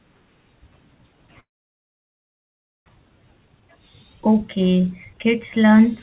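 Speech carried over a narrowband call path, with nothing above 4 kHz as G.711 mu-law would give. From 1.4 s to 2.9 s the sound breaks off into a brief fading buzz and then about 1.4 s of silence. When it returns, nearly a second of material is gone. This is likely a long network dropout, where the receiver padded the gap and the delay jumped by roughly half a second. From 2.98 s to 5.89 s the speech runs hurried at 114% speed with unchanged pitch. This is a jitter buffer speed-up, in which the receiver trims tiny pitch-period slices to drain roughly 0.4 s of excess buffered delay.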